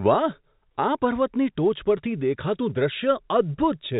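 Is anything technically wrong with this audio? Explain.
No, nothing is technically wrong with this audio.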